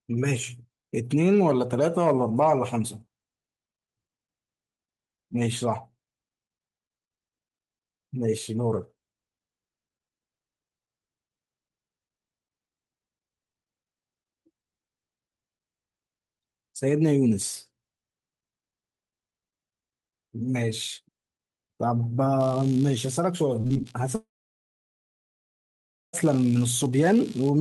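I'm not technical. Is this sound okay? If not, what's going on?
No. From 22.4 s to the end at 27.6 s, computer activity noise from the machine's changing workload leaks into the audio wiring, adding a faint buzz pulsing about seventy times a second.

Short concealed packet loss occurs three times, at 23.61–23.65, 23.67–23.72 and 23.74–23.77 s. Small pieces of the call arrived too late, and the receiver patched each gap, leaving quick smears or wobbles.

Between 24.15 and 26.15 s there is a long network dropout, likely from the connection stalling. A brief fading continuation gives way to nearly two seconds of silence, and the speech returns with that part missing.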